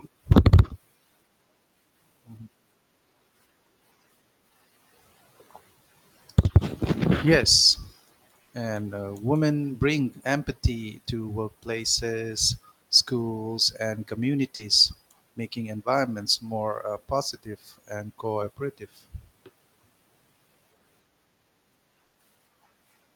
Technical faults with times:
8.43-8.51 burst of packet loss
14.55-14.61 short concealed packet loss
22.05-22.17 burst of packet loss

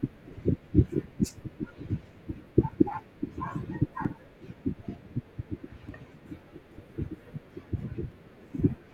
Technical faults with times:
2.71 dropped samples
4.05 dropped samples
5.89 dropped samples
6.92 dropped samples
8.12 dropped samples

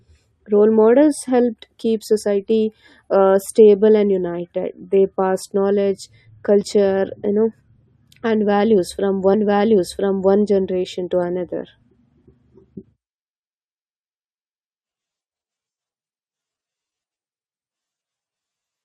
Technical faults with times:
9.33-10.33 stream segment repeated

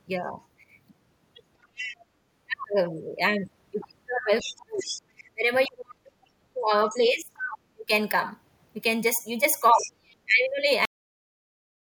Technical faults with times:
1.63-1.97 other side's voice leaking through
4.39-5.02 other side's voice leaking through
4.41-7.89 speech suppressed in double talk
7.34-7.58 other side's voice leaking through
9.72-10.28 speech suppressed in double talk
9.81-9.89 other side's voice leaking through
10.85-11.93 cut-off end

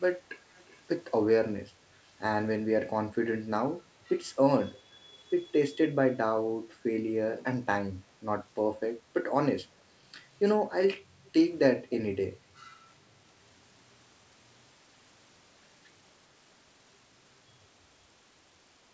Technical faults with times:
0.57-0.79 echo leak
5.13-5.17 echo leak
11.25-11.31 echo leak

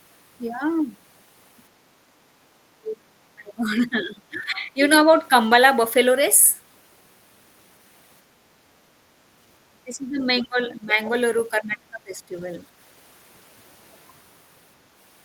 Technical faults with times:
2.74-4.80 speech suppressed in double talk
9.73-10.97 speech suppressed in double talk
11.51-12.43 speech suppressed in double talk

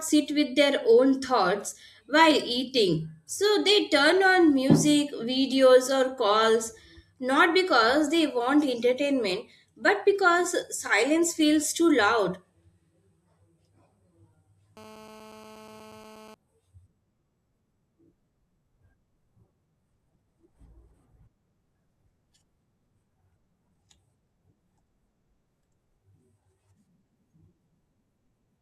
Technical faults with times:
14.77-16.34 GSM phone buzz

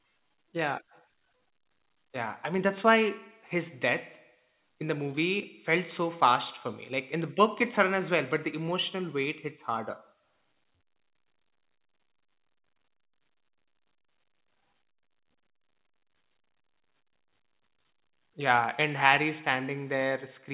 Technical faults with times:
none

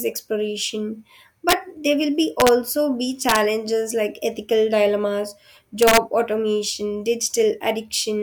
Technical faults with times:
1.49-1.53 integer overflow
2.40-2.49 integer overflow
3.29-3.36 integer overflow
5.82-5.97 integer overflow

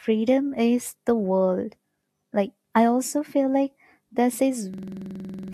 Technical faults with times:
4.74-5.53 system hang loop

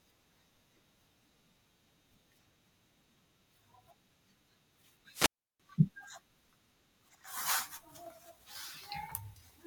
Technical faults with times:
5.12-5.60 wireless microphone squelch dropout

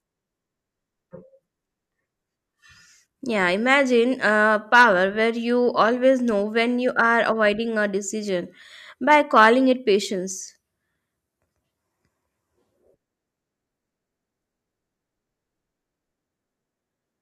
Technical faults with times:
none

